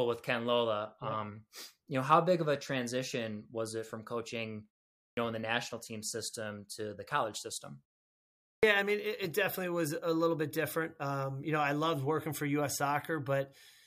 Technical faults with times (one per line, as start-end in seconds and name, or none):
5.10-5.17 clipped start after a pause
8.56-8.63 clipped start after a pause